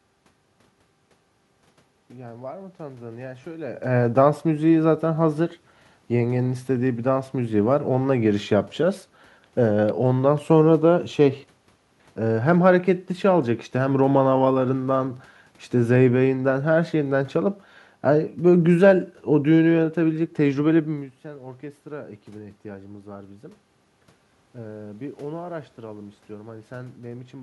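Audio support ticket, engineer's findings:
No system fault found in the speech signal: the steady background is room noise at the mic, and the level shifts near 3.5 s and 21 s come from the talker moving relative to the microphone.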